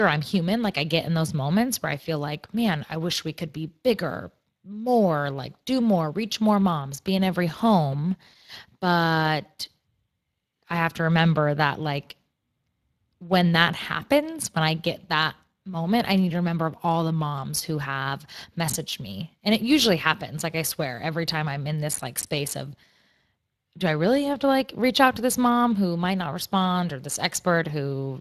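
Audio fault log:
throughout, Speex codec: a hoarse, grainy roughness rides on the speech itself, as a CELP coder short of excitation bits leaves it, which fits a bitrate near 22 kbps. Unlike transform-codec swirl, the damage follows the voice. Nothing sounds above 15.3 kHz.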